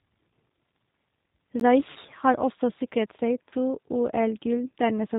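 G.729 coding runs through the whole of this speech recording, and its damage is plainly audible. The codec rebuilds each 10 ms frame from a vocal tract filter, a pitch predictor and a handful of pulses, so nothing above 4 kHz survives and the voice comes across rough and slightly synthetic, the sound of a low-rate G.729A stream at around 8 kbit/s. A block of digital silence at 1.60 s punches a hole about 15 ms long into the sound. The sound cuts out and returns with no fade, and the event is heard as a short tick-like gap of the kind left when an output buffer is not filled in time. VoIP packet loss concealed by the speech codec appears at 1.91 to 1.97 s, just before "har også sikret", where about 40 ms went missing, consistent with two lost packets, and again at 3.49 to 3.54 s, where about 20 ms went missing, pointing to a single packet. In each case the decoder extends its last pitch and filter settings while lowering the gain, so the voice smears into a fading buzzy tone or coloured noise, and because every frame builds on the one before, the sound stays weak and distorted for a short while after the data resumes.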